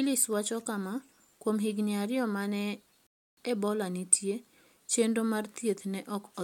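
At 3.07 s, right after "higini ariyo ma ne", the speech drops into a rebuffering stall: the player ran dry of downloaded audio and waited for more. There's dead silence until 3.37 s, then it picks up exactly where it left off, nothing skipped, just 0.3 s added.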